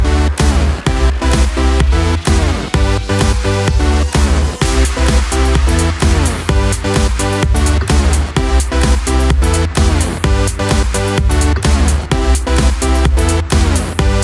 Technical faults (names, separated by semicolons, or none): none